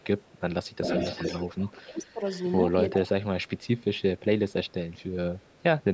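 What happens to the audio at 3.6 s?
At 3.6 s there is an echo leak, from 3.43 to 4.20 s. A very faint copy of the speech returns about 396 ms late. The likely cause is a far-end loudspeaker whose echo canceller let part of its microphone pickup through and back.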